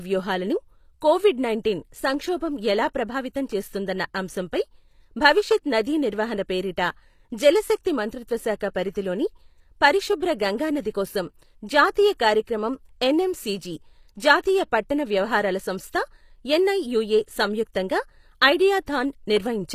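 HE-AAC compression, likely, runs through this speech clip: nothing above 14.9 kHz, with gritty, lispy s sounds where replicated treble misaligns, which fits roughly 24 kbps.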